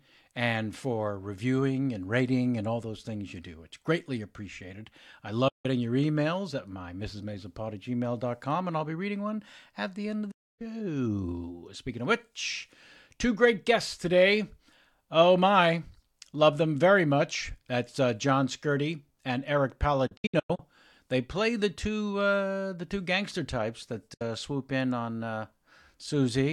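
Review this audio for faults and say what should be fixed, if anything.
The speech drops to silence four times, each cut arriving through a quick fade of about 8 ms and the sound resuming later with the missing stretch simply gone. That's a digital broadcast dropout. The receiver muted while corrupt or missing frames failed their checks. The holes are at 5.48 to 5.66 s (160 ms lost), 10.31 to 10.62 s (288 ms), and 24.14 to 24.22 s (64 ms). At 20.07 to 20.60 s, 288 ms is lost as several short holes scattered over half a second, the longest 96 ms. The lengths fit frames of about 32 ms. Better reception or stronger error protection on the transmission would prevent it.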